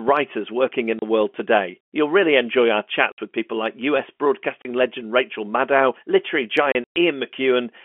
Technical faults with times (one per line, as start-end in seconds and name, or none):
0.99-1.02 packet loss filled with silence
3.12-3.18 packet loss filled with silence
4.62-4.65 packet loss filled with silence
6.72-6.96 packet loss filled with silence